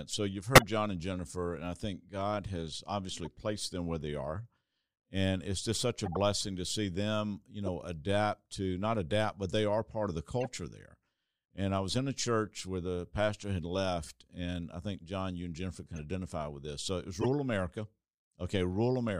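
Short chirps and bursts of noise break into the speech at 0.55–0.63 s, 3.25–3.27 s, 6.05–6.17 s (between "it's just such" and "to see them you"), 7.66–7.69 s and 10.41–10.47 s (after "are part of the"). These are corrupt frames being decoded: flipped bits in one to four compressed frames put energy at the wrong frequencies. The loudest burst, near 0.55 s, peaks around -10 dBFS. At 15.95 s the audio jumps ahead where compressed frames were skipped, with about 30 ms of audio dropped. Corrupt frames chirp once more at 17.21–17.26 s, after "it was".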